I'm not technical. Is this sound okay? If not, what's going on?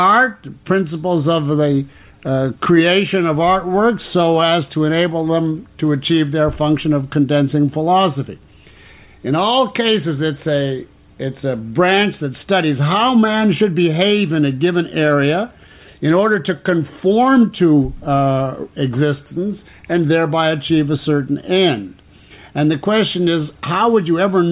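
Yes, nothing wrong turns up anywhere in this recording.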